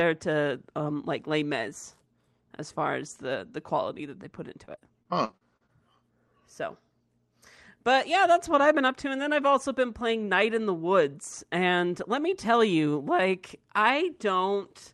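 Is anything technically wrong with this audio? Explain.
Yes. Between 4.65 and 5.70 s the speech breaks up with repeated packet loss, giving it a robotic sound. Packets went missing or arrived late nine times in about a second. Each hole was filled by stretching the sound just before it. The longest gap lasts 42 ms. Roughly a fifth of the stretch is concealment rather than real audio. The result is choppy, with fragments missing. The call codec, which sounds like Opus at around 32 kbps, limits the top end to near 12 kHz.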